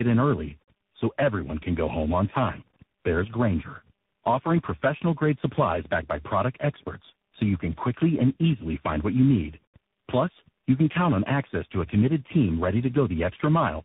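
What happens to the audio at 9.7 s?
At 9.7 s the speech carries tandem speech coding, as it does for the whole clip. The call passed through four speech codecs in a row: GSM full rate, AMR-NB at 7.4 kbit/s, then CVSD twice, joined by G.711 links. Each border decoded the audio and coded it again. Every stage built on the previous stage's damage. The result sounds rough, muffled and warbly. Nothing is heard above 3.8 kHz.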